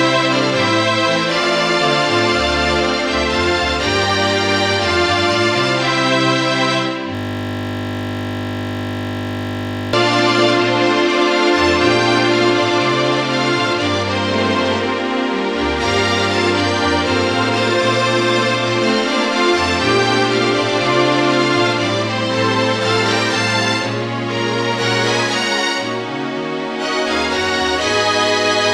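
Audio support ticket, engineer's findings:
System hang loop, 7.15 to 9.93 s. Audio freezes into a steady 50 Hz buzz for nearly 3 s. Probable component: driver or host stalling while the audio interface keeps replaying its ring buffer. One 20 ms slice repeats exactly, around 140 times, which fits a 20 ms buffer. Too short a loop to stutter, so it fuses into a tone at the loop rate.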